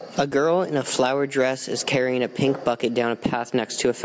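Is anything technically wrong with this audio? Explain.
Yes, there are two problems in this speech clip.

Gain pumping runs through the whole clip. The level swings by roughly 15 dB. The likely cause is mic gain set far too high, so a fast limiter or compressor clamps down on every loud syllable and releases in the gaps. The result is squashed, with loud and soft parts pushed close together.

There are also two repeated-buffer stutters, at 0.31 s just before "in a flowered dress" and at 1.87 s between "a flowered dress is" and "a pink bucket". In each one, new audio didn't arrive in time, so the device replayed its last chunk twice more. Each chunk is about 2.9 ms, which fits a 128-sample buffer. Pieces that short don't come across as an obvious stutter. You hear a quick click or tiny buzz, with around 5 ms of real audio missing at each spot.

The band-limiting from the call's microphone processing, with nothing above 8 kHz, is expected and isn't a fault.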